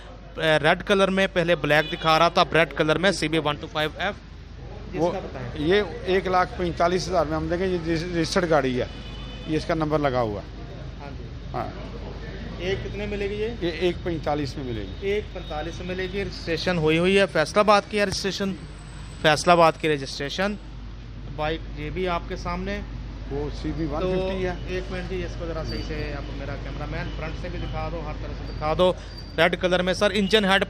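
Throughout the recording, sample clock jitter is present: the converter's timing wanders by a few microseconds, so each sample lands slightly off its intended instant. Steep, loud or high-frequency passages gain a hiss-like roughness some 35 dB below the signal, vanishing during silence.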